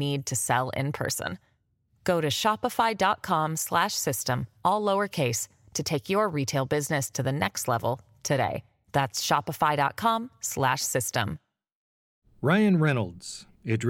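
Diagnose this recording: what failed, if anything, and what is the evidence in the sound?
Nothing failed in this recording, and the sound gives no evidence of any fault.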